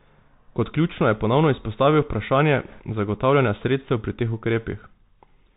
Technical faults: Bluetooth CVSD headset codec; bit errors on a Bluetooth voice link

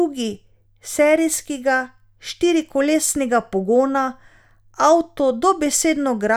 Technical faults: none

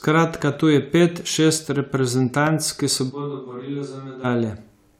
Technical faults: loud pop; switch to a distant microphone

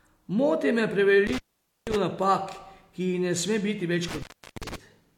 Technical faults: intermittent contact

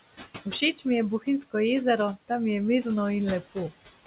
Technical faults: noise suppressor artifacts

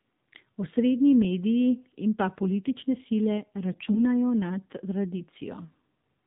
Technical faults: AMR narrowband mobile codec; AMR bit errors

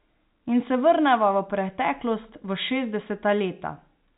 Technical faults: none

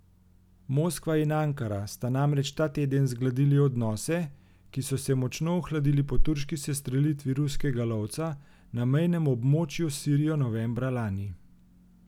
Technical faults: none

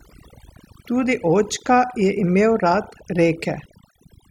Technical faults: overdone noise removal

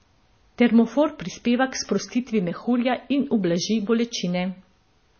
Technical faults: low-bitrate audio saved at a high bitrate

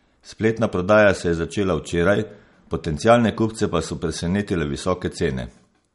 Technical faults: MP3 compression

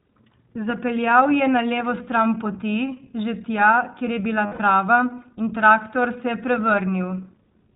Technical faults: iLBC codec; lost iLBC frames

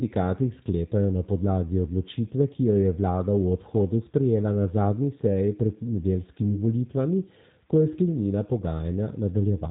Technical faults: G.729 codec

